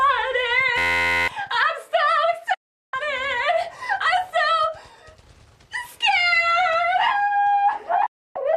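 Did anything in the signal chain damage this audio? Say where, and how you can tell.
Yes. From 0.78 to 1.28 s the sound turns into a steady, mechanical buzz at about 86 Hz: one sliver of about 11.6 ms repeats exactly, around 43 times. This is a system hang loop at the driver or buffer stage. The computer stalled while the audio hardware kept replaying the same ring buffer, which fits a 512-sample buffer. About half a second of the real audio never reached the output.

The second fault is a digital broadcast dropout in reception. The sound fades out over roughly 8 ms and goes silent from 2.54 to 2.94 s, then again from 8.06 to 8.36 s. Those gaps are 384 ms and 288 ms long. When the sound returns it has moved on, so what was transmitted during each hole is gone. The receiver lost the signal or rejected corrupted frames and muted until clean ones arrived. The gap lengths point to runs of 24 ms frames being lost.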